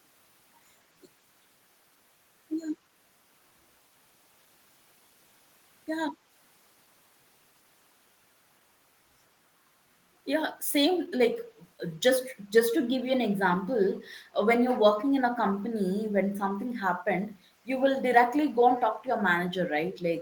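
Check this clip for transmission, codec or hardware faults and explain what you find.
One fault stands out in the speech. From 14.99 to 15.05 s there is a brief, faint echo leak: a delayed copy trailing the speech by 142 ms, likely residue a far-end echo canceller missed. Its distinct, single delay separates it from room reverberation's smooth decay.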